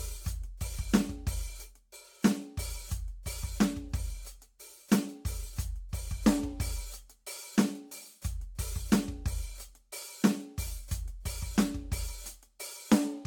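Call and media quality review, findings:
Generation loss throughout: swirly, hollow music, smeared attacks, nothing above 17 kHz; worse than one 96 kbit/s AAC-LC pass would give, likely from around five re-encodes compounding.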